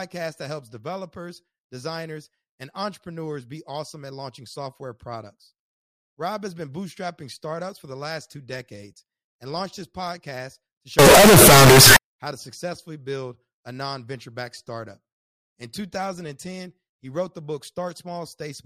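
At 10.99 s, right after "launched his podcast to", the 16-bit samples were likely read with signed and unsigned mixed up, so the top bit of every value flips and each zero crossing turns into a jump across the entire range. Until 11.96 s, just before "how to successfully build", the speech collapses into very loud, harsh distortion, with the quiet moments blaring as loudly as the rest.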